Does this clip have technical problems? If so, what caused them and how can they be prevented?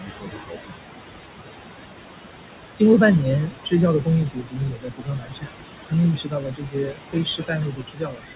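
Yes. Noise suppressor artifacts run through the whole clip. The suppressor pulls down the bands it judges to be steady noise by about 20 dB, frame by frame, against room noise only about 7 dB below the speech. The background dips between phrases and swells under them. Prevention: lower the room noise at the source with a closer microphone or a quieter space, so the suppressor needs less aggressive reduction.

Speech cut by the noise suppressor occurs at 0.00–0.73 s (about 0.7 s affected), 3.46–3.73 s (about a tenth of a second), 4.25–5.52 s (about a second), and from 6.14 s to the end. The suppressor misclassified quiet speech as noise, dropping it by about 20 to 22 dB, so soft consonants and endings sound swallowed. Prevention: use a gentler suppression setting or a speech-aware suppressor, and raise the speech level relative to the noise.

The call path's G.711 mu-law coding leaves nothing above 4 kHz, which gives a narrow sound but is normal for that codec.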